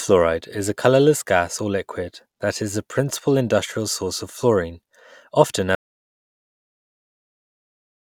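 At 5.75 s, right after "source of fluorine often", the speech drops to dead silence through the end: an audio dropout to silence, likely from lost input.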